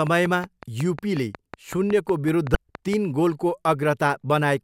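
From 0.07 to 2.94 s, a train of clicks ticks over the speech at a steady 5.4 per second, about twenty in all. The pulses stand well above the voice, likely interference from nearby equipment. At 2.52 to 2.55 s, damaged data in the compressed stream throws off the decoder. It loses sync, and the sound briefly glitches.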